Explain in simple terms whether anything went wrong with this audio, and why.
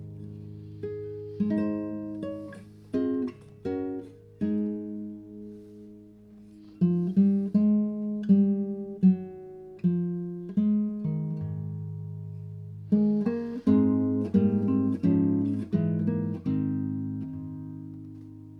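Nothing went wrong here: the audio comes through steady and intact, with no dropouts, glitches or other technical faults anywhere in it.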